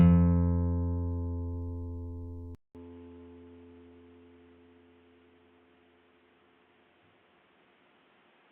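At 2.55 s the audio drops out for about 200 ms, then returns through what is likely an input switched to a poorer device, staying that way to the end. From there nothing reaches above 3.8 kHz, so the sound turns dull and boxy, and a fresh background hiss appears, roughly 35 dB under the signal, while loudness barely changes. The brief gap and the new noise floor set this apart from a simple filter or codec bandwidth drop.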